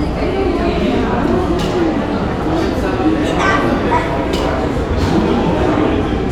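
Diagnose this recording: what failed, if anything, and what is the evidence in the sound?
Nothing in this everyday-sound recording points to a failure at any stage, from wiring and conversion through buffering, processing, transmission, storage or playback.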